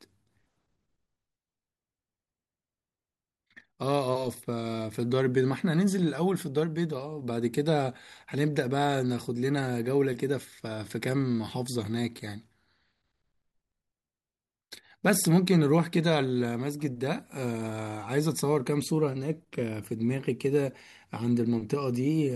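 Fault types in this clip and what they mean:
Resampler restarted on every block: the sample-rate converter, likely taking 44.1 kHz material up to 48 kHz, was reset at the start of each 20 ms block instead of carrying its filter state across, so every block edge was computed without the true neighbouring samples. Each edge leaves a small error, and at 50 per second these merge into a low buzz riding under the speech, present only while sound is playing and gone in the pauses.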